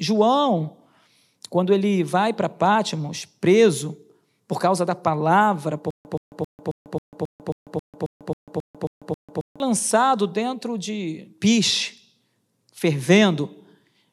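Just after "por causa da palavra", from 5.91 s to 9.6 s, the speech breaks into a stutter with silent gaps: a 125 ms fragment repeats 13 times at an even pace of about one every 270 ms, with roughly 144 ms of dead digital silence after each. The likely cause is a stalled player or stream that replayed its last buffered fragment at every retry and then ran dry. Whatever should have played there is lost.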